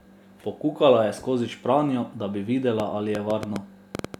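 From 2.80 s to 4.15 s, just after "skozi špranjo da bi", a train of clicks runs over the speech. About ten similar pulses arrive unevenly, near 6 per second, some 10 dB above the signal. They tick through pauses too. Nearby electrical interference is the likely source.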